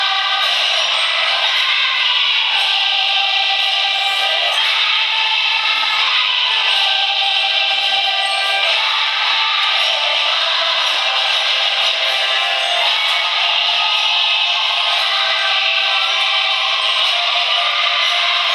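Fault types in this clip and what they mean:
No technical faults can be heard anywhere in the clip. There is nothing to list or explain for it.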